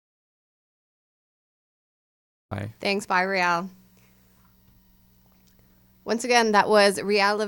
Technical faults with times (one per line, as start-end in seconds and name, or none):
0.00-2.51 audio dropout to silence